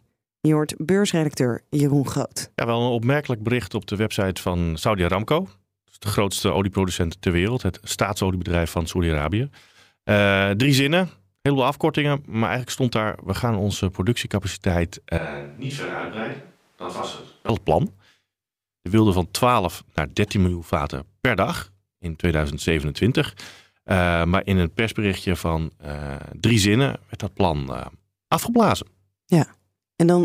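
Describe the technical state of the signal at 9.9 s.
Around 9.9 s the speech signal is intact, with no audible dropout, distortion, clipping or other fault at that point.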